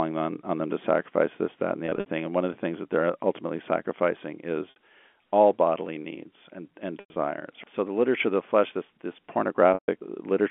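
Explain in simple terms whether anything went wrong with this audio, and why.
Brief buzzy, held-over sounds break in at 1.86–2.06, 4.70–4.76, 7.00–7.16 and 9.74–9.88 s: packet loss with pitch repetition, where the receiver repeats the last sound to cover missing pieces.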